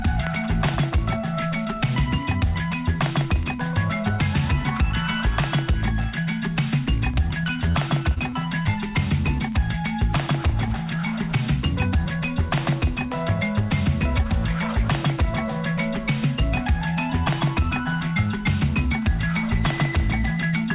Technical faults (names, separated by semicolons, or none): short concealed packet loss